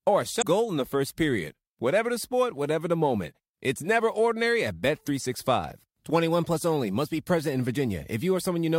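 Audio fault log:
0.38–0.44 s, damaged data in a compressed stream: right after "or a" there's a short glitch, before "in the first period". A stretch of the compressed data got mangled, so the decoder lost sync and skipped to the next good frame.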